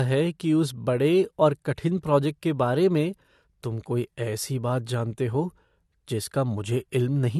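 Low-bitrate audio saved at a high bitrate runs through the whole speech clip: nothing is present above about 12.3 kHz, and the top end sounds dull. The likely cause is an earlier low-bitrate encode, pointing to AAC, later re-saved as a high-bitrate MP3 that cannot restore the lost detail.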